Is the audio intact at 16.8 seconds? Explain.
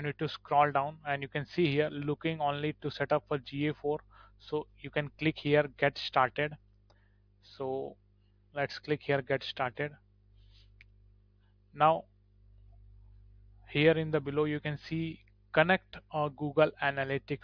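Yes, the audio is intact at 16.8 seconds, with no dropout, click, distortion or other fault at that point.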